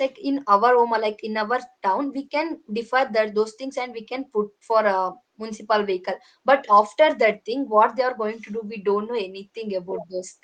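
No technical faults are audible.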